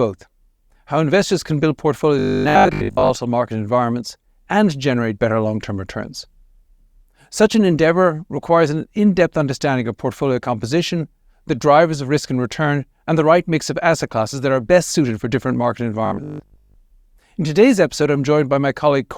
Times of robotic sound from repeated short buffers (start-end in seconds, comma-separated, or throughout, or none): 2.19-3.17, 16.06-16.76